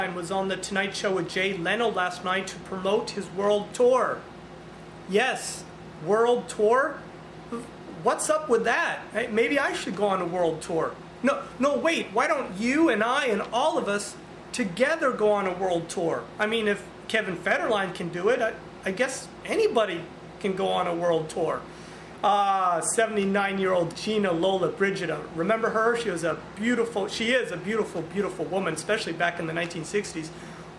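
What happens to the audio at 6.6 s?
Nothing goes wrong at 6.6 s; the audio runs on intact there, with no dropout, click, glitch or other fault at that moment.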